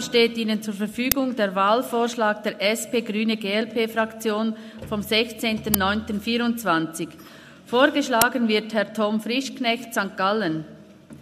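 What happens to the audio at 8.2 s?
At 8.22 s the playback side sends out a block of memory before any audio has been written into it, an uninitialised buffer. Whatever stale data happened to sit in that 5 ms block is read as if it were samples, so the sound is interrupted by a brief, loud crack, bearing no relation to the surrounding audio, before normal output resumes.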